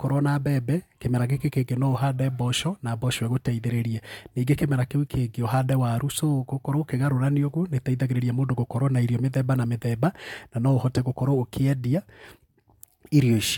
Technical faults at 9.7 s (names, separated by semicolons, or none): none